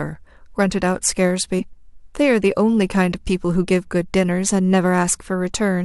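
At 1.58 to 1.61 s, compressed frames are skipped. About 50 ms of speech is lost. The decoder jumps ahead.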